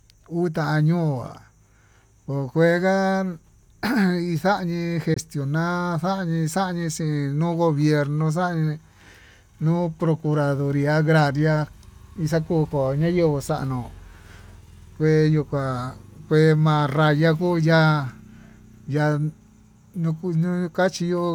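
At about 5.14 to 5.17 s the speech just drops out for a moment, with a hole where the output goes silent and then picks up again. It sounds like a Bluetooth dropout, likely from a packet that didn't reach the headphones in time and got thrown away. Around 20 ms of audio is missing, which fits a single lost packet. When the sound comes back it has moved on as though it kept playing through the gap, so nothing gets repeated.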